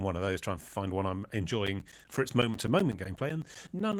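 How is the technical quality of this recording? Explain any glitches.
The speech is marred by a string of periodic USB or driver dropouts. From 1.67 s to 3.93 s, just after "to find one I'm", about twenty gaps of around 10 ms each recur every 0.125 s. Each time, a blocked driver or bus loses a slice of audio and fills it with silence. You hear a regular ticking, and a spectrogram shows evenly spaced vertical gaps with flat waveform notches.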